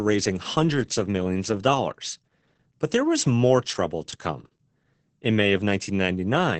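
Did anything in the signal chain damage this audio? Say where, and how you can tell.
Yes, at the codec stage, throughout the clip. Opus voice compression in its SILK linear-prediction mode was run hard, which fits a bitrate around 10 kbps. Nothing remains above 8.8 kHz, and the coarsely coded excitation leaves the speech muffled, hoarse and slightly robotic.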